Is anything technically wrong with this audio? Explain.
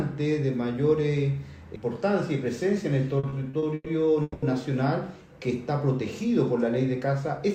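Yes. From 3.19 to 4.45 s there are repeated stalls (stutter): packets arrived late, so the jitter buffer kept running dry and the receiver stretched the last sound across six gaps, the longest 200 ms, 450 ms in all. Nothing is lost, but the audio drags and stutters.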